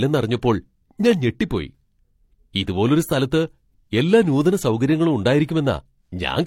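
Throughout, the speech carries layered coding artefacts with nothing above 16.3 kHz. This is likely transcoding between lossy codecs, consistent with MP3 re-encoded to low-rate HE-AAC.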